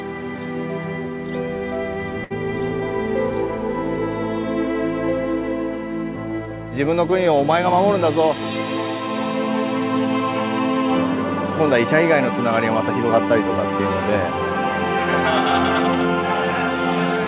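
At 2.24 s the sound stalls into a brief held buzz or hiss that fades until about 2.32 s, then resumes slightly further on with roughly 60 ms skipped. This is a burst of packet loss. Consecutive packets went missing over the G.711 A-law call path, so the receiver extended the last audio for 62 ms while turning it down.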